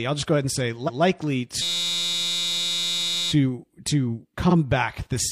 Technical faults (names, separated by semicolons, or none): repeated frames; system hang loop